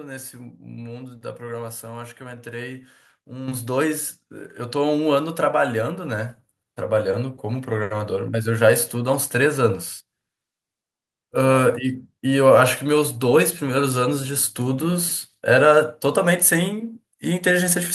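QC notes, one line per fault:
3.48 s: microphone volume stepped up. The input level rises abruptly by about 8 dB, with the speech and the background noise jumping together in a single step, which points to the call software judging the microphone too quiet and raising the device's input volume at once. On the waveform the envelope widens suddenly at this point and stays larger. On a spectrogram every band, noise floor included, brightens evenly across a sharp vertical boundary.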